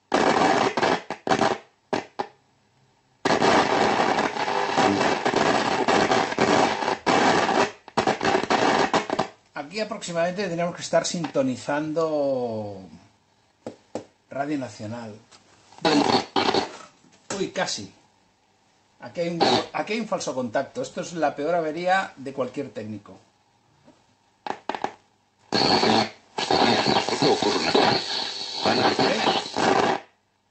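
No technical faults are audible anywhere in the audio.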